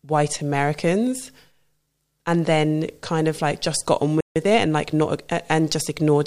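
Right after "like just got on", the speech cuts to silence from 4.21 to 4.36 s, about 150 ms; this playback stall likely came from the player running short of data. From 4.36 to 5.36 s the speech rushes at about 1.15 times normal speed, pitch unchanged: time-compressed catch-up, with small pieces cut and cross-faded to clear the backlog.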